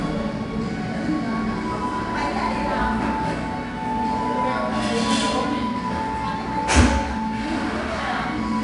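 From start to end, 4-bit ADPCM compression is plainly audible. Each sample is coded as a coarse step from a prediction. The error becomes a gritty hiss riding every loud sound. Sharp attacks distort. Nothing sounds above 10.6 kHz, which fits a sample rate near 22 kHz.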